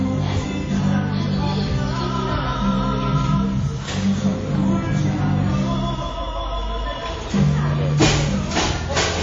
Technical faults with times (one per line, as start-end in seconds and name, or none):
0.00-9.23 WMA compression